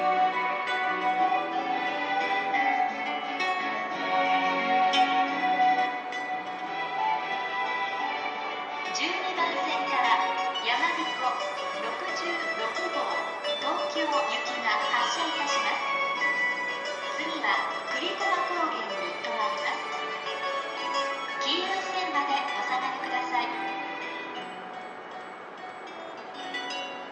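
Nothing stood out as a technical problem on listening to the recording.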